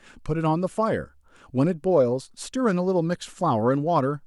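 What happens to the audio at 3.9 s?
At 3.9 s the speech continues intact, with no audible fault at that moment.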